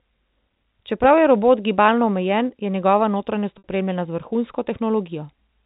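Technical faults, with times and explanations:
3.58 to 3.64 s, packet loss with pitch repetition: right after "omejen je njegova notranjost" about 60 ms of audio drops out, which fits three 20 ms packets going missing. The receiver fills the hole by looping the last pitch period it had, so you get a brief held, buzzy tone that fades toward silence over about 50 ms before the speech cross-fades back in.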